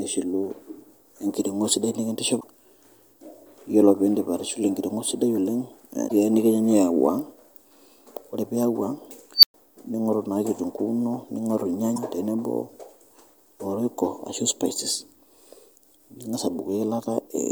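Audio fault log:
2.37–2.44 s (after "engiring'o sidai"), 6.05–6.12 s, 11.93–11.98 s: damaged data in a compressed stream. Corrupted frames make the decoder lose sync, producing brief glitches.
9.36–9.54 s: unstable filter. A tone around 5 kHz swells over 72 ms until the filter overflows, then 112 ms of silence follows before it resets.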